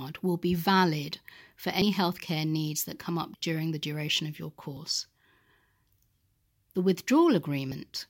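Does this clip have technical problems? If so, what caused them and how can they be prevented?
Yes. The speech skips at 1.82, 4.77 and 7.72 s, each losing about 50 ms. This is likely audio missing between chunks, about every 3 seconds. Overlapping or continuously buffered recording chunks would prevent it.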